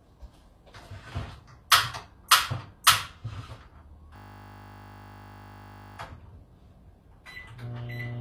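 A recording of everyday sounds, and the whole thing has that gritty, metallic treble you get from spectral band replication. It's most likely HE-AAC compression at a low rate, around what 24 kbps would give, with nothing at all above 14.9 kHz. The top end reaches higher than you'd expect, but it's rebuilt from copied lower bands rather than the real thing. There's pre-echo at 2.28 s and again at 2.84 s: a smear of hiss about 27 ms long comes just before each sharp attack. The codec spread its noise across the block and into the quiet moment ahead of the hit, so the attacks sound softened. Then from 4.16 s to 5.98 s there's a system hang loop. A single 20 ms slice repeats exactly, 91 times over, so you hear a steady 50 Hz buzz while the hardware keeps cycling the same buffer.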